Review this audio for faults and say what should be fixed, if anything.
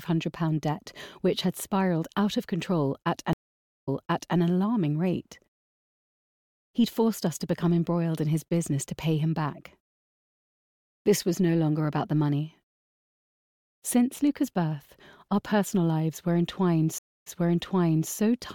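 Two stream reconnects occur, at 3.33 to 4.37 s and 16.98 to 18.12 s. The connection drops, the audio goes silent for 0.51 s and then 0.25 s, and a fresh decoder restarts. Playback resumes 0.52 s and 0.89 s earlier, repeating material. A steadier connection and sequence-aware resumption would prevent this.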